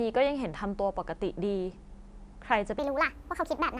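At 2.79 s the speech suddenly jumps up about 6.5 semitones and runs 1.45 times too fast until the end, a wrong sample rate with no conversion. The voice turns chipmunky and rushed, which fits 22 kHz audio being played at 32 kHz.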